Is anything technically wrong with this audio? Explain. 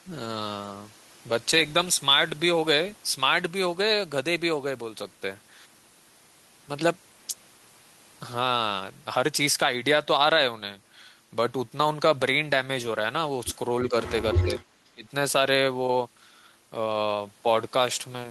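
Yes. Two related faults cluster between about 13.9 and 15.1 seconds.

The first is speech suppressed in double talk. The speech dips three times: briefly at 13.89 to 13.94 s by a few decibels, at 14.34 to 14.61 s by about 10 dB, and at 14.94 to 15.06 s by about 25 dB, which nearly cuts it out. The likely cause is an echo canceller on the call. With both sides talking, it could not tell this talker from its own loudspeaker's echo. So it turned the level down.

The second is an echo leak, from 14.31 to 14.45 s. A delayed copy of the speech comes back 356 ms late. It sits only about 5 dB below the speech and comes back as a short scrap. This likely happened because one end was on a loudspeaker. Its echo canceller did not remove everything the microphone picked up. The leftover was sent back down the line.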